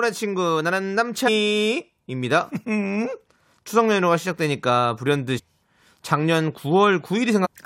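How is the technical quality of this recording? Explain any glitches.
Three short glitches mar the recording, all of the same kind: damaged data in a compressed stream, at 1.27–1.29 s, 5.38–5.40 s and 7.44–7.47 s. At each point a stretch of the encoded speech data was corrupted, so the decoder misread those frames, lost its place and had to hunt for the next valid frame header. Each break lasts only about 20 ms and comes out as a quick chirp, squawk, click or short hole in the speech.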